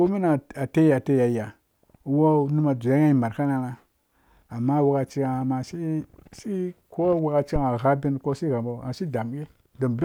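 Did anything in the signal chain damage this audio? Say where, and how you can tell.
Yes, at the analogue input. A phantom power thump at 7.56–7.64 s peaks about −13 dBFS. A supply switching step through coupling capacitors, decaying in 18 ms.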